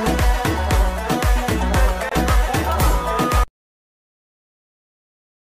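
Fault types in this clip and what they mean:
Gap between stream segments: at 2.09 s the sound drops into a hard-edged silent hole of about 24 ms, where two stream segments of about 2 s fail to meet in time. The player fills the gap with silence. Nothing is lost; later audio simply arrives slightly late.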